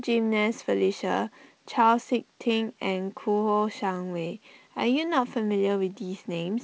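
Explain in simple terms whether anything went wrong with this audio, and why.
Nothing went wrong: the speech has passed through G.722 wideband telephone coding, which leaves only a light hiss of its own, and no fault turns up anywhere in the clip.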